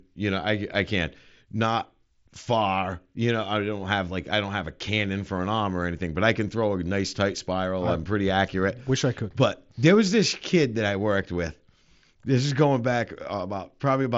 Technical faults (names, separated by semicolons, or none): none